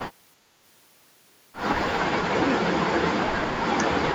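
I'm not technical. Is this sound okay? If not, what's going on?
No. The voice briefly drops out around 2.28 to 2.46 s, then keeps sinking and cutting out in pieces from 2.97 to 4.05 s, at times almost vanishing. This is speech suppressed in double talk. The likely cause is both people talking at once: the call's echo canceller couldn't tell this voice apart from the other person's sound coming through the speaker, so it turned both down.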